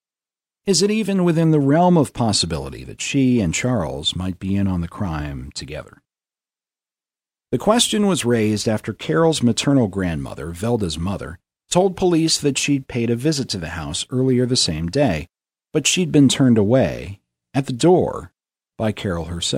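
No technical faults can be heard anywhere in the speech recording. Nothing in the signal chain stands out as having gone wrong at any point.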